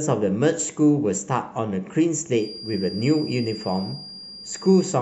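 From 2.32 s to the end of the speech, a feedback whistle sits behind the signal: a thin, steady tone at 4.8 kHz, roughly 15 dB below the speech, swelling and fading slowly in level. The likely cause is a loudspeaker-to-microphone loop held just short of runaway feedback.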